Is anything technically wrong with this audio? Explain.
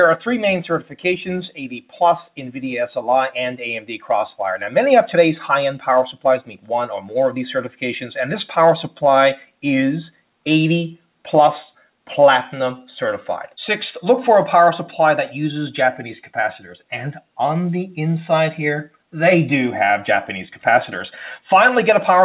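Yes. A speech noise suppressor was left on over non-speech audio. It treats steady content as noise, so the level swings by around 5 dB throughout. The waveform envelope breathes, and sustained bands in the spectrogram flicker rather than holding steady.

Sound cut by the noise suppressor happens at 0.81–1.05 s, 1.8–2.01 s, 3.81–4.08 s and 6.42–6.7 s. Sustained or decaying parts sink by about 12, 12, 10 and 12 dB respectively. Each shows as a short notch in the waveform and a darkened patch in the spectrogram.

The audio passed through a call path with nothing above 4 kHz, which points to a narrowband codec such as G.711. That shows as a flat ceiling in the spectrogram.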